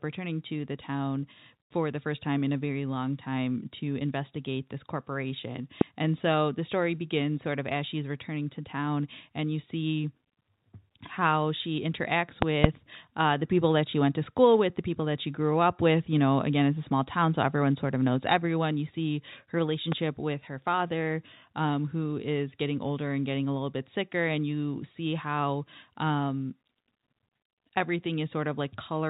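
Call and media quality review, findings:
Loud pop at 5.81 to 5.83 s, right after "to investigate this corporation". Sharp click riding about 20 dB over the speech. Likely a plug or switch transient hitting the line.

Double loud pop at 12.42 to 12.67 s, between "how she interacts" and "uh the people that". Two thumps, about 25 dB hot. Likely a loose connector making and breaking.

Loud pop at 19.92 to 19.94 s, between "see her" and "with her father um". Milder, about 15 dB. Likely static discharge.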